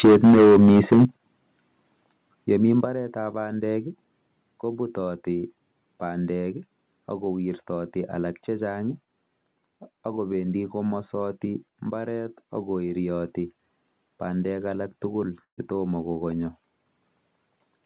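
Speech clip, carried over a narrowband call path with nothing above 4 kHz, which fits a G.711 mu-law codec. From 0.04 to 1.05 s there is microphone overload. Peaks run about 8 dB past the converter's limit, and roughly a fifth of the samples are flattened. The loudest syllables get a harsh, crackling edge. The likely cause is an input volume set too high.

The microphone volume is stepped down three times, each an abrupt drop in voice and background together. The first comes at 0.05 s, by about 3 dB. The second, at 1.05 s, is about 10 dB, right as the distortion ends. The third, at 2.85 s, is about 6 dB. Each step likely comes from the call software's automatic gain control cutting the device level after hearing clipping.

A burst of packet loss hits from 15.44 to 15.60 s, just after "alak tugul". The receiver stretches the last sound for about 134 ms, fading it into near silence. Then the speech resumes with about 140 ms missing.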